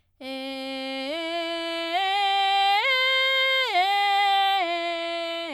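No faults detected anywhere in this music clip.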